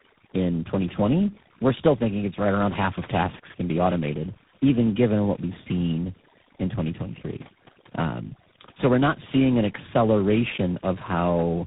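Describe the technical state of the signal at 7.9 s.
At 7.9 s, as across the whole clip, overdone noise removal has pulled bands near the noise floor to near silence, leaving the background broken into twinkling specks. Tandem speech coding is also present: repeated decode-and-recode passes, which fits a chain of roughly three speech codecs, make the speech rough, muffled and warbly, with nothing above 3.8 kHz.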